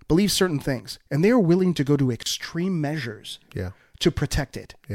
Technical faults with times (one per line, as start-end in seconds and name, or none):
2.23-2.26 gap at a join of encoded pieces